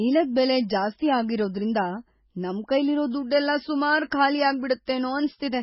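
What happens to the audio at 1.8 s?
At 1.8 s, as throughout, the speech has a watery, swirling quality and nothing above 5.5 kHz, likely from MP3 compression at a very low bitrate, around 16 kbps, discarding treble and weak frequency detail. Unlike a plain low-pass filter, the swirling shows that detail is being dropped from frame to frame, not just treble removed.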